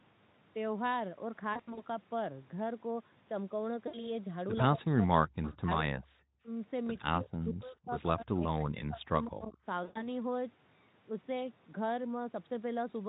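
It's a speech clip from a call, and a few things go wrong. First, VoIP packet loss concealed by the speech codec shows up three times. Around 1.53 to 1.83 s, about 120 ms of audio goes missing in short runs of no more than 40 ms, scattered across roughly a quarter second. Again at 3.87 to 4.11 s, about 60 ms is lost. And at 9.83 to 10.08 s, another 120 ms drops out. In each gap the decoder keeps extrapolating from the last bit of voice it had, so you hear a smeared, buzzy stretch that sags in level, and the voice takes a moment to firm up after real audio returns. Next, the talker keeps getting ducked in what sounds like speech suppressed in double talk. It happens at 4.76 to 5.28 s, 5.54 to 6.19 s, 7.09 to 7.93 s and 8.13 to 9.61 s, with the deepest dips reaching something like 40 dB. There's also a shallow, brief one of around 10 dB at 6.43 to 6.47 s. The likely cause is the echo canceller losing track when both ends talk at once and turning the near talker down along with the echo, so the voice fades, thins or breaks up in chunks. 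Finally, right between two of those dips, at 5.42 to 5.53 s, there's an echo leak. A faint copy of the voice comes back about 182 ms late, sitting roughly 20 dB under the speech. That's probably a loudspeaker at one end whose echo canceller let a bit of residue slip through.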